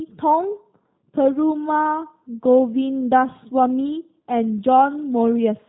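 Throughout the speech, the G.729 codec damage is plainly audible. The speech has been rebuilt from a vocal tract filter, a pitch predictor and sparse pulses, so it sounds rough and synthetic, with nothing above 4 kHz. The sound fits an 8 kbit/s G.729A stream.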